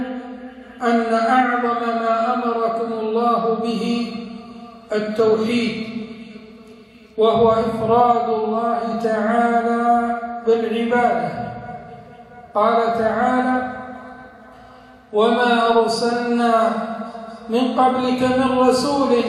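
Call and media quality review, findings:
Nothing to flag on this one; listened all the way through and there's no audible problem anywhere in the recording.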